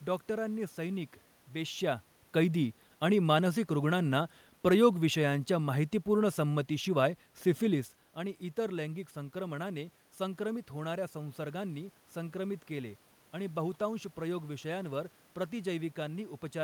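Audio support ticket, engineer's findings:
No system fault found; level shifts near 1.5 s and 7.5 s are the talker moving relative to the mic, and the steady background is room noise in the recording.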